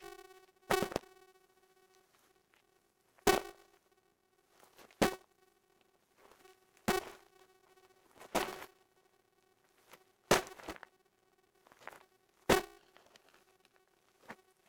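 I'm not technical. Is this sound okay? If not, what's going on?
No. There's a fault called filter restarted on every block: a filter forgets its running memory after each small chunk of audio, which fits a 128-sample block, and starts over. Each restart adds a tiny click, producing a steady 375 Hz buzz throughout that grows louder with the sound.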